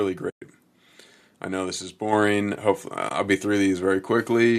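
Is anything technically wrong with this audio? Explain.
Yes, the speech has two kinds of fault.

AAC frame loss with muting occurs at 0.30 to 0.42 s, about 120 ms, and again at 3.09 to 3.11 s. The decoder zeroes the missing frames, and overlapping windows fade the sound smoothly out and back in. The result is a soft hole.

The microphone volume is stepped up at 2.13 s by about 4 dB. Speech and background rise together in one instant jump, unlike gradual automatic gain riding.

A light graininess is likely due to low-delay AAC coding.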